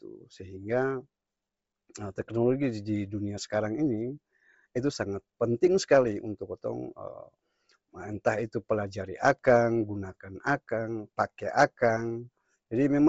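Throughout the speech, the signal has likely passed through Bluetooth LC3 compression at a low bitrate, around what fits 24 kbps with 7.5 ms frames. Starved of bits, the codec discards much of the upper spectrum and patches the gaps with synthetic noise, and nothing survives above 7.7 kHz. The damage is heavy: the voice carries a breathy, grainy haze in its upper range, and sibilants lose their crisp edge.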